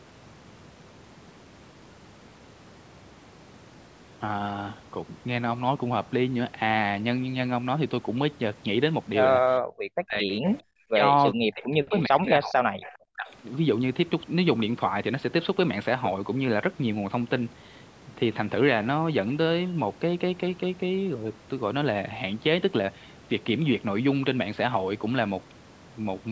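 From 10.01 to 10.28 s the speech suddenly sinks, by roughly 40 dB at its deepest, and returns. The same thing happens at 10.86 to 11.03 s, over a longer stretch from 11.34 to 12.74 s, and again at 13.14 to 13.28 s. This is speech suppressed in double talk. Both ends were likely talking at once, so the canceller could not tell the near talker from loudspeaker echo and turned everything down.

A faint, delayed copy of the speech comes back about 0.41 s after the original at 10.3 to 10.61 s, 11.9 to 12.02 s and 12.81 to 12.98 s. A very brief trace follows at 13.26 to 13.31 s. These copies sit well below the main speech, quietest in the last one. This is echo leak. The far end was likely on a loudspeaker, and its echo canceller let part of what its microphone picked up travel back down the line.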